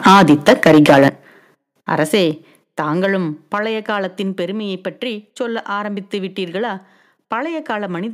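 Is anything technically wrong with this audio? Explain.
Yes, two related problems. From 0.05 to 1.08 s there's microphone overload: the peaks run about 11 dB past the converter's limit, so around a tenth of the samples get their tops flattened. That's likely an input level set too high, and it gives the loudest syllables a harsh, crackly edge.

The microphone volume also gets stepped down three times: about 4 dB at 0.07 s, about 9 dB at 1.08 s, and about 4 dB at 2.31 s. Each is an abrupt drop in voice and background together, likely the call software cutting input gain after detecting the clipping.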